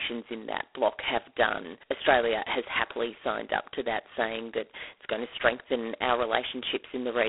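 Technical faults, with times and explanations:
Throughout, G.726 ADPCM: the speech is confined to roughly 300 Hz to 3.5 kHz, with nothing above 3.9 kHz, and carries a heavy, rasping hiss that rises and falls with the speech level, which fits 16 kbit/s coding of sample-to-sample prediction differences rather than plain band-limiting or a transform codec's swirling artefacts.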